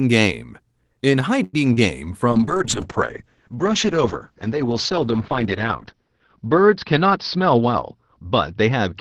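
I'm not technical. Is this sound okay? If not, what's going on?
No. A short stall from a late packet, at 1.43 to 1.55 s, holds the sound for about a tenth of a second while the call waits for delayed audio, then carries on.

A short concealed packet loss at 1.73 to 1.79 s drops a brief piece of audio, and the receiver patches the gap by extending the last sound, giving a little smear.

A call bitrate drop from 2.33 s to the end makes the call send far less detail. The sound turns rougher and more muffled, losing the upper tones above about 6 kHz.

A jitter buffer speed-up, at 6.96 to 8.77 s, trims about a tenth of a second in tiny slices to cut delay, so the speech runs about 5% faster at the same pitch.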